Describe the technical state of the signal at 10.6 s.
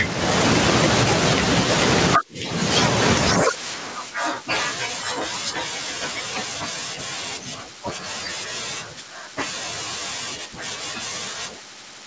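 Gain pumping is present at 10.6 s, as it is throughout the clip. The gain swings by around 15 dB. Loud and quiet stretches end up squeezed close together in level, and the speech sounds flattened. The likely cause is microphone gain set far too high, with a fast limiter or compressor pulling it down on each peak. Nothing is heard above 8 kHz, as expected for the call path.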